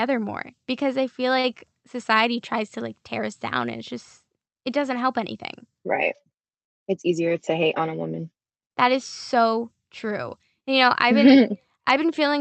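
At 1.39 to 1.47 s, right after "more because i feel", a short stall from a late packet holds the sound for about 43 ms. The jitter buffer ran empty, so the receiver stretched the last sound and then resumed before "society tries to like". Unlike a concealed loss, nothing is skipped. The speech just hangs briefly with a slight buzz or dip.

From 7.09 to 7.82 s, ending just before "a woman that is", a jitter buffer speed-up plays the speech at 105% speed. Holding more audio than it wanted, the receiver cut out short pitch-period slices, around 40 ms in total. Pitch stays the same, which sets it apart from a resampling error, so the passage only sounds slightly hurried.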